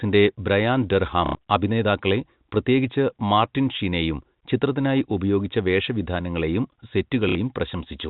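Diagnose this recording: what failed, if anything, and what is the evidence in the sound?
Network stage: packet loss with last packet repeated, at 1.26–1.35 s right after "ബ്രയാൻ ഡർഹാം" and at 7.29–7.35 s. Each gap gives a buzzing stutter, which fits roughly 30 ms packets.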